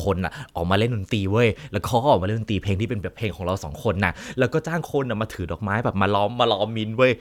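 Nothing in this recording stands out as a technical fault; the speech simply runs on without any dropout, glitch or interruption to point to.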